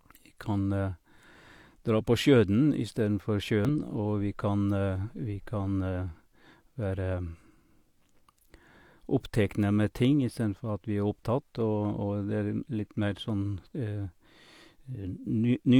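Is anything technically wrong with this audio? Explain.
Yes. Damaged data in a compressed stream at 3.65 s: corrupted frames make the decoder lose sync and hunt for the next header, producing an audible glitch.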